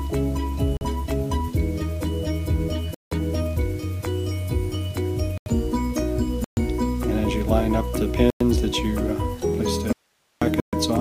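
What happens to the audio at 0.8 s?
From 0.77 to 0.81 s there is a block of digital silence, about 43 ms long, which fits a 2048-sample buffer that was not filled in time and went out as zeros. The signal drops straight to nothing and returns without a fade, leaving a short hole.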